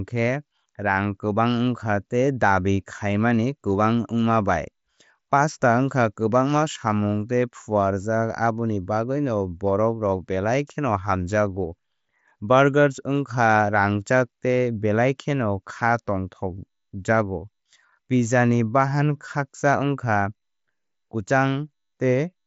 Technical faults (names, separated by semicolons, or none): none